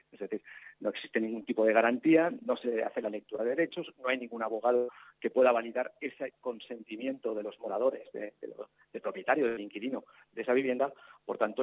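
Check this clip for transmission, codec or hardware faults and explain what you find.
Two kinds of packet-loss fault are audible, carried over a call path whose band stops at 4 kHz, which points to a narrowband codec such as G.711 mu-law.

Short concealed packet loss occurs at 1.42–1.46 s and 3.36–3.40 s. Each time, about 20 ms failed to arrive and the receiver extended the preceding sound to cover it, leaving a brief smear or wobble.

A burst of packet loss occurs at 4.76–4.90 s and 9.48–9.59 s, with 120 ms and 80 ms lost. The concealment stretches and fades the last sound into a held buzz or hiss before the audio resumes further on.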